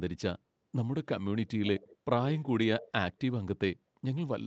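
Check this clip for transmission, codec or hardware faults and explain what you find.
One kind of fault is present: echo leak, at 1.65–1.97 s, 2.39–2.44 s and 2.79–2.92 s. A copy of the speech returns about 483 ms late. The likely cause is a far end on loudspeaker whose echo canceller let some of the microphone pickup through and sent it back. The echo sits about 25 dB below the speech in the first stretch and about 30 dB below in the second. The third is clearest, at about 15 dB below.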